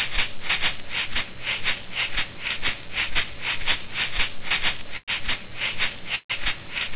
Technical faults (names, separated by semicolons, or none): call audio freeze